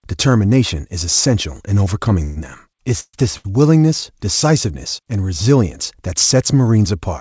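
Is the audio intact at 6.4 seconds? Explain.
Yes, the speech is intact at 6.4 seconds, with no dropout, glitch or other fault at that moment.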